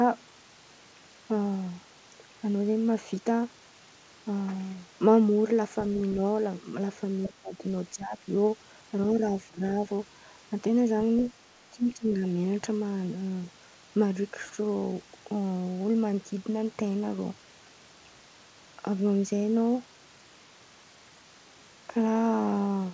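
At 7.24 to 7.29 s a brief scrap of a second voice surfaces, sitting roughly 15 dB below the main speech. It is likely the other side's voice leaking through: the far end played on the talker's loudspeaker, reached the microphone, and the echo canceller left a residue rather than removing it fully.

Right after, from 7.29 to 7.63 s, the speech sinks for most of that stretch, by as much as around 15 dB at its deepest. It dips again from 7.94 to 8.27 s, less deeply, by about 10 dB. At 9.46 to 9.62 s there is a short, sharp cut of roughly 25 dB. From 11.71 to 12.23 s there is a half-second dip of around 15 dB. Each drop likely comes from speech suppressed in double talk: with both ends active, the canceller could not tell the near talker from the echo and attenuated everything.

Throughout, the band stops at 8 kHz, which fits the G.722 call path.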